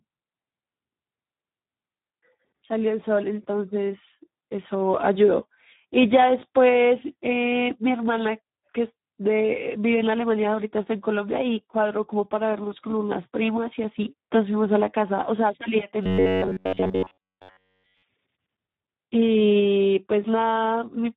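Speex codec damage runs through the whole recording. The speech is hoarse, grainy and noisy, the sound of a CELP coder working with very few bits to describe the excitation, which fits a low setting around 8 kbps.

Robotic sound from repeated short buffers appears from 16.03 to 18.03 s. The voice turns into a rigid, metallic buzz fixed near 93.8 Hz, while the speech rhythm still shows through roughly. The likely cause is new audio arriving too seldom, with the software looping the last fragment of about 10.7 ms to fill the gaps for most of that stretch. The real audio in between is skipped, so the looping imposes that steady pitch.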